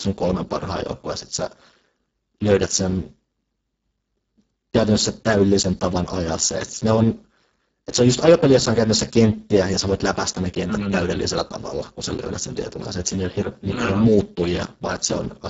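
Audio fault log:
throughout, Speex codec: the speech sounds hoarse, buzzy and grainy, with a robotic edge, and the top end is a thin hiss-like wash that stops at 7.7 kHz. This CELP coder rebuilds speech from a predicted spectral envelope and a coarsely coded excitation. At a very low quality setting, consistent with roughly 6 kbps, the excitation is starved of bits, so the voice loses natural texture and the upper band is only shaped noise fill.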